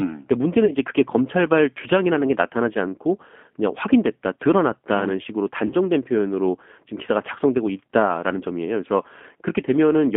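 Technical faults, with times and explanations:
Throughout: G.729 codec. The speech is squeezed into a narrow telephone band of about 200 Hz to 3.4 kHz and rebuilt at 8 kbit/s from a vocal tract model and a few pulses per frame, so it sounds plainly rough and synthetic. Unlike plain band-limiting, the roughness is in the voice itself.
0.65–0.73 s and 5.67–5.75 s: VoIP packet loss concealed by the speech codec. A gap of about 30 ms, which fits a single lost packet each time, is filled by the decoder stretching the last pitch and filter into a fading buzzy tone or coloured noise. Because each frame builds on the last, the voice stays weak or distorted for a moment after the gap instead of simply dropping out and coming back.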